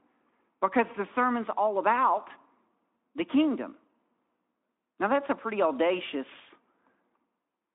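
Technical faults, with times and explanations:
No technical faults are present: the speech sits in a telephone-style band of about 200 Hz to 3.6 kHz with nothing above 3.8 kHz, as expected of the Speex codec carrying it, which leaves only a light coding trace on the sound.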